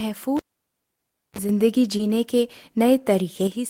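Speech, marred by three faults. A cable pulled and plugged in runs from 0.37 to 1.39 s: a pop cuts the signal to near silence for about 0.97 s, then a 32.5 ms burst of 50 Hz mains buzz as the plug's tip makes contact first, and a second pop when the sound returns. A sudden gain jump from 1.49 to 3.47 s lifts the speech and its background noise together by about 6 dB with no ramp, likely from a digital gain setting applied in a single step rather than faded in. A short concealed packet loss at 1.97 to 2.01 s leaves a 20 ms gap that the receiver covers with 20 ms of extrapolated sound before crossfading back, heard as a brief smear or wobble in the speech.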